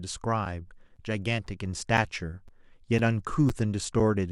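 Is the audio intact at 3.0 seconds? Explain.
No. A gap between chunks at 2.99 s: the speech was delivered in 0.5-second pieces with 6.5 ms of silence at this join, leaving a brief hole.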